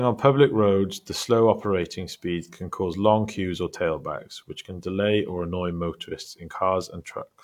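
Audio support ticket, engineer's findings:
No faults found on review of the speech recording; nothing to trace to any component, ticket can close.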